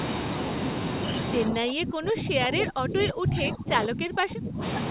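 From 1.45 s to 4.62 s, the echo canceller was likely caught in double talk: with both ends speaking at once, it could not tell this talker apart from its own loudspeaker echo and turned everything down. The speech dips across about three seconds, at its deepest falling by roughly 25 dB. The narrow band, with nothing above 4 kHz, comes from the G.711 mu-law call path.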